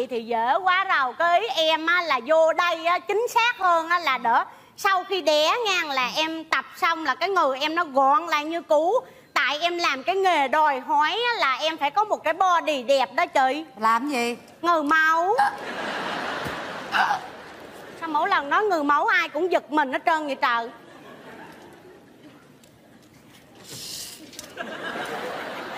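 No technical faults can be heard anywhere in the clip, so there are none to describe.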